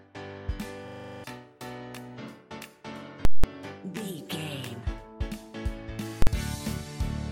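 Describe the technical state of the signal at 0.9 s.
At 0.9 s you're inside a system hang loop running from 0.88 to 1.24 s. The machine stalled while the hardware kept replaying one 40 ms chunk, nine times over at 25 Hz, so you hear a buzzy, rattling stutter, and roughly 0.4 s of real audio goes missing.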